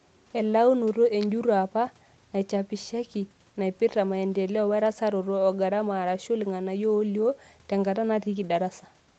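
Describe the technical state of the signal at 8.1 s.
At 8.1 s the speech is intact, with no fault audible at that moment.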